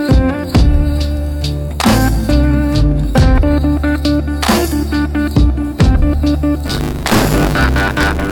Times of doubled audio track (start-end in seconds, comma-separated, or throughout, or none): none